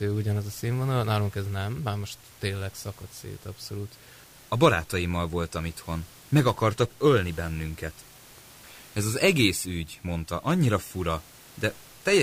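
Nothing goes wrong with the audio in this speech recording, and the only thing in the background is the room's own noise, sitting about 26 dB below the speech as part of the recording itself.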